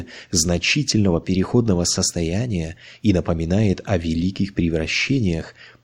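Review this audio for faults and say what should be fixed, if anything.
Nothing needs to be fixed, as the audio has no faults.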